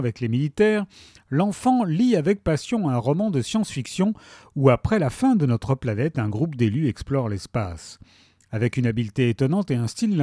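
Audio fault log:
No faults are audible: the audio signal has an unbroken waveform with no interruptions, distortion or spurious additions.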